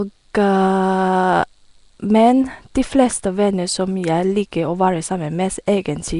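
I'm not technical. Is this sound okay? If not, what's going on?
No. Nellymoser compression runs through the whole clip. The speech sounds rough and hissy, plainly smeared and underwater, and nothing above 10.6 kHz survives. This is likely the old Flash microphone codec, which spends so few bits that faint parts are replaced with noise.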